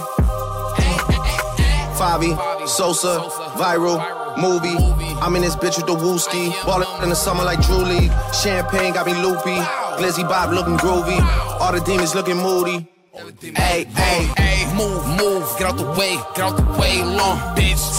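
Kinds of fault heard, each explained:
frames out of order: two adjacent blocks play swapped, giving a garbled flutter at 1.05–1.27 s (halves about 93 ms each) and 6.62–7.03 s (about 186 ms). Unlike a dropout or stutter, nothing is lost or repeated.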